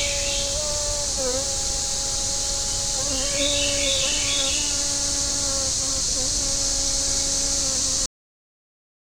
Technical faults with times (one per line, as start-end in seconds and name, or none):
8.06-9.16 cut-off end